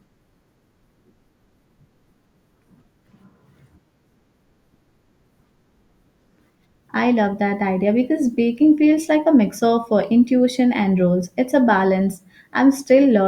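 Speech, with no technical fault to be heard anywhere in the recording. Nothing in the signal path draws attention to itself.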